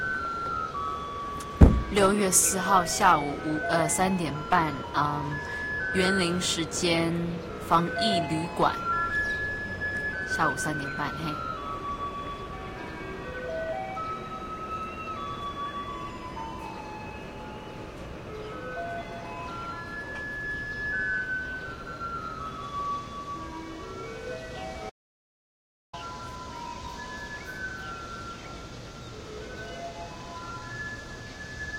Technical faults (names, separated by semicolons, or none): audio dropout to silence